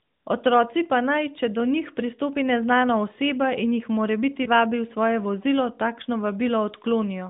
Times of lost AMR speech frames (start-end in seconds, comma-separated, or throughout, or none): 4.44-4.49